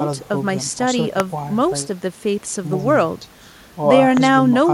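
A loud pop hits at 1.20 to 1.22 s and again at 4.17 to 4.19 s. Each is a single sharp click lasting about 20 ms, peaking something like 15 dB above the speech, and the speech continues underneath without a break. Both are most likely a brief voltage spike, such as static discharge or a switch or connector glitch, added to the signal and shaped by the circuits after it into a short, hard transient.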